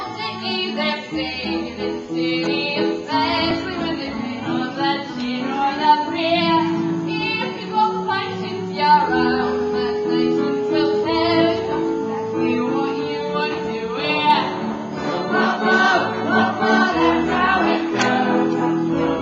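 At 3.51 s the audio briefly freezes, an underrun with held sample: the buffer ran dry for about 2 ms and the converter held its last value. Unlike a dropout to zero, the flat hold barely clicks, and nothing is skipped when playback resumes.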